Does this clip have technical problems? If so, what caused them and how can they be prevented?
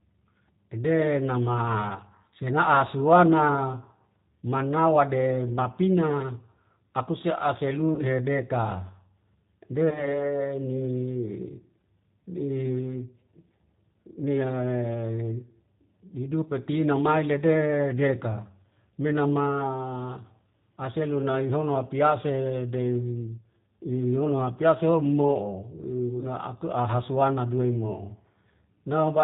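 Yes. The speech runs throughout through the G.729 codec, plainly audible at a rate that fits 8 kbit/s. Nothing above 4 kHz survives, and the speech sounds rough and synthetic because it is rebuilt from a vocal tract filter and pulses. A simple low-pass filter would only dull the sound, without this buzzy texture. Using a wideband codec such as G.722 or Opus would prevent it.

VoIP packet loss concealed by the speech codec occurs at 7.95 to 8.06 s, where about 40 ms is missing, and at 9.90 to 10.22 s, where about 20 ms is missing. The decoder extends the last sound into a buzzy tone or coloured noise that fades, instead of leaving silence, which separates this from a plain dropout. After the second loss the speech stays weak or distorted until about 10.22 s. A larger jitter buffer, forward error correction and network QoS would reduce these losses.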